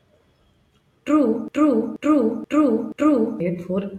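At 1.48 s the playback chain likely stalled, with the player, encoder or stream holding onto its last fragment and sending it out again instead of fresh audio. The result is a broken-record loop: a 0.48 s slice of the speech repeats four times, back to back and identical each pass, until 3.40 s. The speech that belonged in those nearly two seconds never arrives, so the talker seems to stutter mechanically and then jump ahead.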